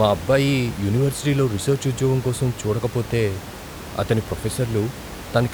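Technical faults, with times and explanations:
Nothing stood out on listening to this speech clip; the only background is the room's own noise, sitting about 14 dB below the speech.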